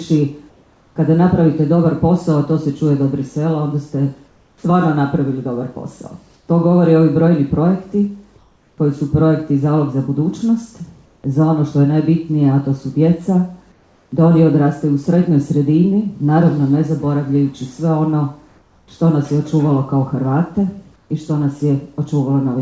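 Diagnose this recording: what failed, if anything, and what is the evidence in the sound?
Call processing is the stage at fault: comfort noise in place of the background. In the pauses at 0.50–0.96, 4.28–4.64, 8.38–8.78, 11.06–11.24, 13.72–14.12, 18.48–18.88 and 20.96–21.10 s, the room tone, about 38 dB below the loud passages, turns into a flat, detail-free hiss, dropping by about 1 to 5 dB. This is likely discontinuous transmission: the sender stops sending in silence and the receiver synthesises matched noise. A noise gate would drop to silence, and packet-loss concealment would smear or repeat the sound. The 8 kHz band ceiling fits a wideband call codec such as G.722.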